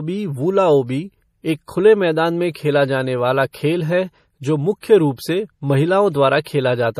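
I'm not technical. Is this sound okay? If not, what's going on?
No. Throughout the speech there is a watery, swirly quality, with metallic chirps on s sounds and smeared starts of sounds. This is MP3 compression damage, most likely from saving the file with too little data to spare. The encoder dropped quieter details, which flicker in and out, and cut away everything above 15.2 kHz. A simple treble cut would only sound duller. The flickering swirl is what marks this as MP3 damage.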